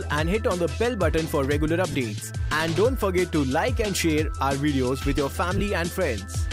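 At 1.92–1.95 s and again at 5.58–5.60 s, lost LE Audio frames leave brief noisy smears, about 30 ms and 22.5 ms long, consistent with a few 7.5 ms frames going missing. Unlike a clean dropout to silence, the LC3 decoder fills each gap by repeating the preceding spectrum with scrambled phase.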